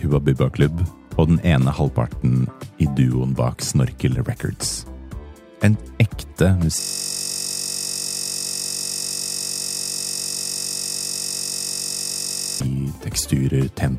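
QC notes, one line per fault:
6.80–12.60 s, system hang loop: the system locks up and the sound hardware keeps replaying one tiny 21.33 ms slice of its buffer, which fits a 1024-sample ring buffer. That slice repeats over 270 times across almost six seconds. Because the loop is so short, you don't hear separate stutters. It merges into a steady, flat buzz at about 46.9 Hz, the loop rate itself, until the audio finally recovers at 12.60 s.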